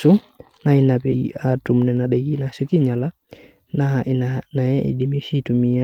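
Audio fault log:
1.11–1.13 s, skip ahead: The speech jumps abruptly forward with no gap, the two sides butted almost directly together, and about a second of speech is simply missing. Audio already waiting was dropped, most likely by an overflowing jitter buffer, cutting delay at once.
1.21–4.09 s, jitter buffer speed-up: The speech sounds hurried, running at about 108% speed while its pitch stays unchanged. With too much audio held, the receiver repeatedly removed short pitch-period pieces, trimming roughly a fifth of a second overall to shrink the delay.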